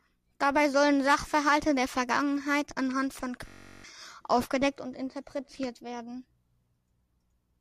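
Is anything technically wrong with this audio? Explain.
Yes. From 3.48 to 3.84 s there is a system hang loop: the system stalled while the audio hardware kept replaying one 21.33 ms buffer (which fits a 1024-sample buffer) 17 times. The result is a steady buzz at 46.9 Hz, with roughly 0.4 s of speech lost. Because every repeat is identical, it differs from a dropout's silence or the smeared repetition of packet-loss concealment.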